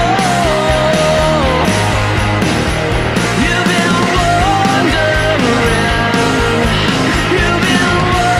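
Nothing technical stands out here; the audio runs its whole course without any dropout, glitch or other fault worth pointing to.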